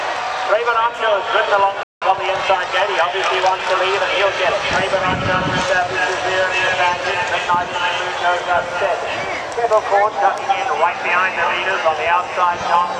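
The audio stops dead at 1.83 s and stays silent until 2.02 s, a gap of about 0.18 s. This is a playback stall, likely the player running short of buffered data or its output thread being held up. It is not a dropout, where content goes missing. Here the output simply goes silent until the player recovers, so the interruption is a pause rather than a hole. What follows confirms it: from 2.02 s to 3.84 s the player works off the backlog the pause created with time-compressed catch-up. It removes small slices of the signal and cross-fades across the joins so the audio runs at about 1.1 times normal speed. This differs from a simple speed-up or resampling error because the pitch stays where it should be. The giveaway instead is a hurried pace, which ends at 3.84 s when normal timing resumes.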